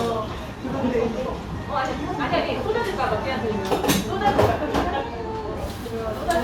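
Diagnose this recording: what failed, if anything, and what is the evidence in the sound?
Nothing failed; no stage shows a fault here.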